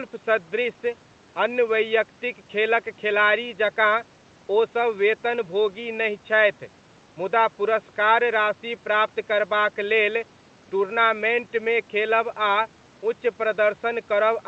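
Speech recording with no technical faults to report.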